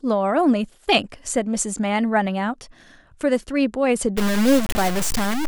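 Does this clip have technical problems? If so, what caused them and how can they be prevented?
Yes. From 4.17 s to the end at 5.47 s the speech turns harshly grainy, with distortion that tracks the voice. This is low bit depth without dither, likely from truncating to around 4 bits, which leaves the error only about 10 dB below the speech. On a waveform the trace becomes visible stair-steps, with quiet parts snapping flat. A spectrogram shows a broadband haze that rises and falls with the voice rather than a steady noise floor. Prevent it by keeping at least 16 bits and applying dither whenever word length is reduced.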